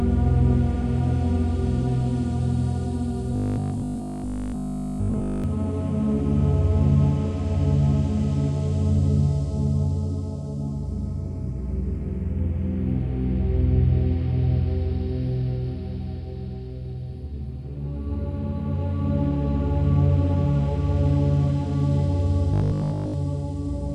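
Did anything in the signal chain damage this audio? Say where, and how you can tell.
Yes, robotic sound from repeated short buffers, most likely at the driver or buffer stage, from 3.36 to 5.44 s and again from 22.54 to 23.14 s. The sound turns into a rigid, metallic 50 Hz buzz, which fits the last 20 ms being replayed while fresh audio is skipped. The first stretch is almost entirely repeated; the second mostly. Mains hum at 50 Hz would sit under the whole clip; here the buzz replaces the sound only within these spans.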